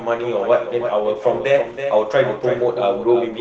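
A quieter second copy of the speech runs throughout, trailing the main sound by roughly a third of a second and sitting about 10 dB down. It is a doubled audio track, likely from the signal being captured again by a slower path. On a waveform each burst of speech has a smaller, identical burst offset to its right. A spectrogram shows the same full-band pattern repeated with no smeared decay. From 0.76 s to 3.17 s there is a call bitrate drop. The Opus coding, which already tops out near 8 kHz on this call path, turns rough and watery, hitting its worst for about 1.1 s. This fits the encoder falling from around 32 kbps to 17 kbps. A spectrogram of that span shows blotchy, coarsely quantised energy.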